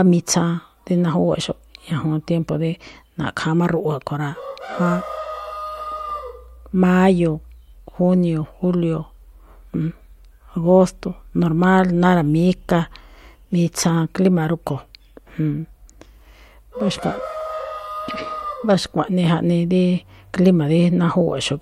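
The speech recording shows no technical fault, with the signal holding steady throughout and nothing in it that points to a problem anywhere in its capture or handling.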